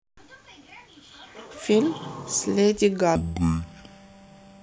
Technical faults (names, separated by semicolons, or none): stereo read as mono